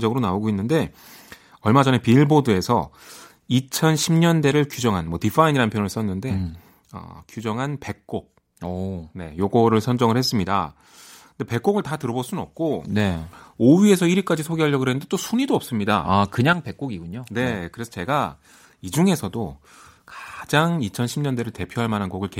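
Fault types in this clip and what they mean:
One channel drops out: three times in this speech the level falls abruptly by about 6 dB and then returns, at 6.98 to 9.38 s, 10.45 to 12.85 s and 16.53 to 18.93 s, each step lasting 2.4 s. The likely cause is one stereo channel going silent before the mono sum. On a waveform the envelope shrinks to half its height with vertical edges; a spectrogram shows uniformly dimmer bands across all frequencies, with sharp boundaries.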